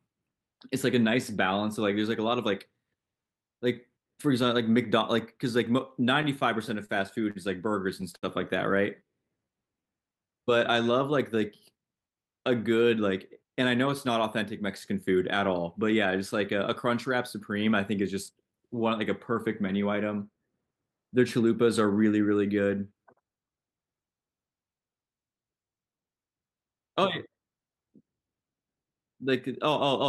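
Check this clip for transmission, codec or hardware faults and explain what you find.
There are timing faults, all from the network side: a stutter, two short stalls, then a stretch played slow and a stretch played fast. The speech comes through an Opus call path, with the top end cut at about 12 kHz, and the sound points to a fairly generous bitrate, around 64 kbps.

Repeated stalls (stutter), 6.05 to 6.91 s. Packets kept turning up late, so the jitter buffer ran dry five times in under a second. Each time the receiver stretched the last bit of sound to cover the hole, the longest about 29 ms and about 73 ms in all. Nothing is actually lost, but the speech catches and drags in little hiccups.

Short stall from a late packet, at 7.31 to 7.37 s and again at 8.16 to 8.25 s. Both times a single packet missed its slot, the buffer emptied, and the receiver held the current sound until the packet showed up, then carried on where it left off. 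The holds are 48 ms and 66 ms. You hear one sound hang a touch too long, with a faint buzzy or dipped quality.

Jitter buffer slow-down, 9.03 to 11.36 s. Here the buffer was short on reserve, so the receiver padded it by repeating single pitch periods and slivers of pauses over and over, adding about 148 ms. Playback runs at roughly 94% speed with the pitch unchanged, so the speech sounds drawn out and a bit lazy.

Jitter buffer speed-up, 13.32 to 16.06 s. Now the buffer was holding more than it wanted, the way it does when delayed packets land in a bunch, so the receiver trimmed out tiny chunks a pitch period or so long, many in a row, around a fifth of a second altogether. The speech plays at about 107% speed at normal pitch and comes across slightly rushed.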